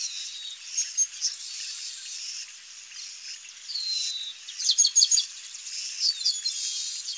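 Nothing here is technically wrong; the audio simply came through a wideband call link, which is why nothing sits above 8 kHz, consistent with G.722 at 64 kbps.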